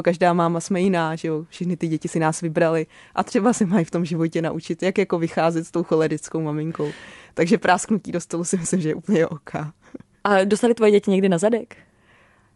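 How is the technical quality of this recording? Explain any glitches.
No technical faults are audible anywhere in the speech, so there are no glitches to explain.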